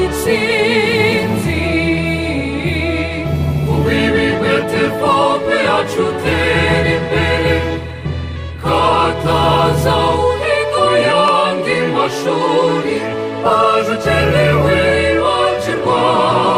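A regular click recurs about every 0.85 s from 0.28 s to 16.36 s, roughly twenty in all. It likely comes from clock drift buffer slips, where two clocks differing by around 200 ppm force a few samples to be dropped or repeated each time. These show as evenly spaced thin vertical broadband lines on a spectrogram and small step discontinuities in the waveform.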